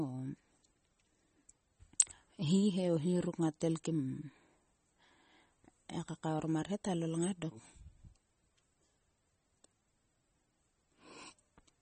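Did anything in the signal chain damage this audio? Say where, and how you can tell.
Yes. Throughout the speech the sound has a watery, swirly quality, with s sounds breaking into metallic chirps and consonant attacks smeared. Nothing is heard above about 8.4 kHz, a hard ceiling. Both point to the codec stage, likely MP3 compression at a low bitrate, with the damage fitting something near 32 kbps. Starved of bits, the encoder discards the treble at a fixed cutoff and zeroes quieter frequency lines, which flicker on and off between frames.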